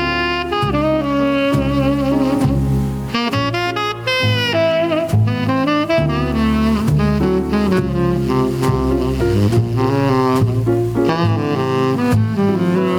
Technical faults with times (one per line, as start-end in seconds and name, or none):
0.00-12.99 gain pumping